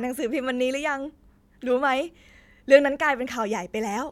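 Speech, with no audible technical fault anywhere in the recording.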